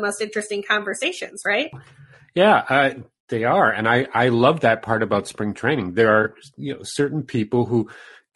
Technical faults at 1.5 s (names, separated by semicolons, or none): low-delay AAC compression; AAC frame loss with concealment